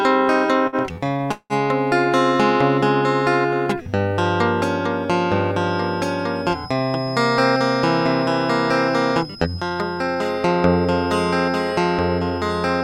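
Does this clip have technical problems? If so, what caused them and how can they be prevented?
Yes. There are four kinds of fault in this music clip.

Short stalls from late packets occur at 0.67 to 0.76 s and 1.16 to 1.23 s. Each time a packet arrived late and the jitter buffer ran dry. The receiver held the last sound for 53 ms and then 36 ms, and nothing was lost. A slightly deeper jitter buffer would absorb these small delays.

A call audio freeze runs from 1.32 to 1.53 s. The last sound is stretched into a fading buzz for 182 ms, including 50 ms of silence, and then the music resumes where it stopped. The likely cause is packets held up on the network. Steadier network routing or prioritising the audio traffic would prevent it.

A feedback whistle at 5.1 kHz starts at 5.61 s and lasts to the end. It is a thin, steady tone about 20 dB below the music, wavering slightly. It likely comes from the loudspeaker leaking into the microphone at the edge of feedback. 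Using headphones or echo cancellation would stop it.

Jitter buffer speed-ups occur at 9.35 to 10.58 s, at 111% speed, and 12.09 to 12.39 s, at 112%. The receiver trimmed short pitch-period slices to drain excess buffered audio. It removed about 150 ms and then about 50 ms. The tempo rushes while pitch stays put. Gentler buffer adaptation would avoid this.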